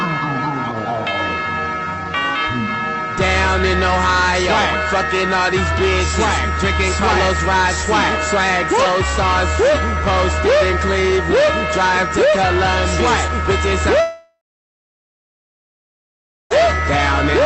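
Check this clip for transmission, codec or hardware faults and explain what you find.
One transmission fault stands out: a long network dropout.

From 14.00 to 16.52 s the sound turns into a short, fading buzz, then goes silent for about 2.1 s before returning with that stretch gone. Packets likely stopped arriving, so the receiver briefly extended the last audio, then fell back to silence.

The call path, Opus at 32 kbps, limits the top end to about 8 kHz.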